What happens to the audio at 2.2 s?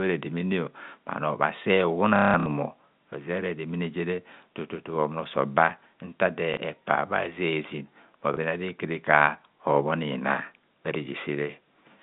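Packet loss with the last packet repeated, from 2.16 to 2.46 s: about 240 ms of audio is missing across that 300 ms stretch, and the receiver loops the most recent packet to fill each gap, the longest run lasting 180 ms. Because the loop repeats at the packet rate, the run buzzes like a brief robotic stutter. On a waveform it shows as identical repeating blocks; a spectrogram shows flat, frozen harmonics.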